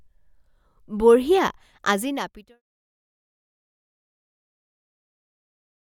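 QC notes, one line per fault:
No faults found.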